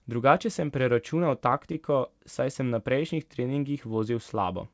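A speech clip carried over a call path whose G.722 coding leaves nothing above 8 kHz. Between 1.10 and 1.96 s there are scattered short gaps, about five lost or late packets, each around 10 ms or less. The receiver filled each by continuing the previous sound, giving brief ticks and smears. On a spectrogram these show as thin vertical seams where harmonics briefly freeze or blur, and on the waveform as tiny repeated or kinked cycles.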